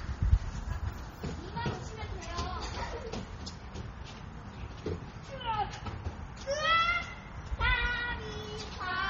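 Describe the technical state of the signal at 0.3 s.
At 0.3 s the sound carries heavy MP3 compression, present throughout the clip and likely from a starved low-bitrate encode, around 32 kbps. Weak frequency lines drop in and out, giving a watery, swirly texture. A spectrogram shows a hard ceiling at 15.9 kHz and flickering holes below it.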